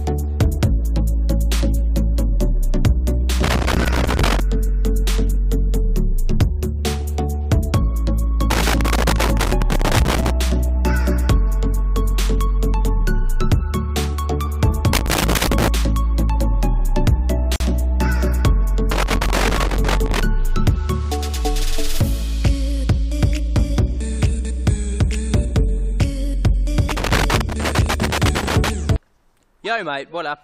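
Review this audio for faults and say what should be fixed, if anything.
Loose connector crackle occurs at 3.43–4.40, 8.50–10.30, 14.93–15.68, 18.92–20.21 and 26.89–28.69 s. A worn contact intermittently breaks the signal, which chops it. On a waveform these look like irregular spikes and dropouts, and on a spectrogram like broadband vertical streaks. Clean or replace the connector and secure the cable.

A gap at a join of encoded pieces opens at 17.56–17.60 s, lasting about 43 ms. Separately encoded segments kept their encoder delay and frame padding, so the sound stops and then resumes where it left off. This shows as a thin near-silent notch in the waveform and a blank vertical band on the spectrogram. Trim encoder delay and padding when joining, or encode the material in one continuous pass.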